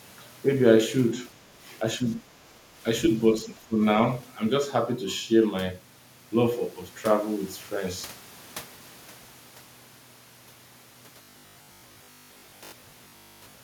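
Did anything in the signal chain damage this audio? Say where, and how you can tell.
Yes. Speech suppressed in double talk at 1.35 to 1.40 s, 1.98 to 2.29 s and 3.68 to 3.82 s: the level dips by about 10 to 15 dB, showing as notches in the waveform envelope. This likely comes from the call processing's echo canceller ducking while both sides talk.

Robotic sound from repeated short buffers from 11.22 to 13.62 s, likely a driver or buffer underrun. Roughly half the audio is replayed 20 ms chunks, forcing a rigid 50 Hz buzz that appears as evenly spaced harmonic stripes on a spectrogram.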